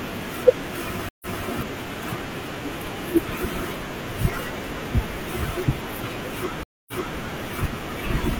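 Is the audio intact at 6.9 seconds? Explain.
No. A stream reconnect spans 6.63 to 7.18 s: the connection dropped, and the player reconnected and restarted its decoder mid-stream. The speech cuts to about 0.25 s of silence, then resumes roughly 0.3 s earlier, so a stretch is heard twice.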